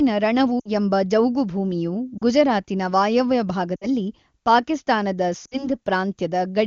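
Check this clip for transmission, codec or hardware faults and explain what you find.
Four bursts of lost AMR speech frames are present, all in wideband speech whose AMR-WB coding is clean at its high rate.

They occur at 0.60 to 0.69 s (just before "ಎಂಬ ಜೌಗುಭೂಮಿಯು ಗುಜರಾತಿನ"), 2.18 to 2.24 s (right after "ರಣವು ಎಂಬ ಜೌಗುಭೂಮಿಯು"), 3.76 to 3.87 s and 5.45 to 5.68 s. Each gap fits two or three 20 ms frames that failed their checksum. The decoder repeated the last good pitch and spectral settings at falling gain, so the speech smears, then fades quickly before recovering.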